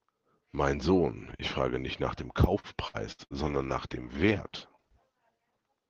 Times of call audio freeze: none

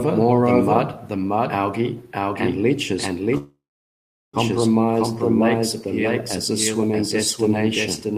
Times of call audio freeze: 3.37-4.36

